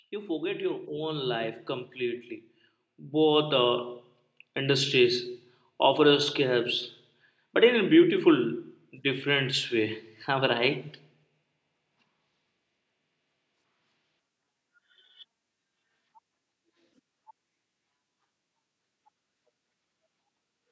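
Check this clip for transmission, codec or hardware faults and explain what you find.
One fault is present: automatic gain rising, from 0.1 s to 4.91 s. The gain control judged the input too quiet and raised its gain by about 13 dB over nearly five seconds, so the speech and the background noise swell upward together. The clip's call microphone processing, with nothing above 8 kHz, is normal.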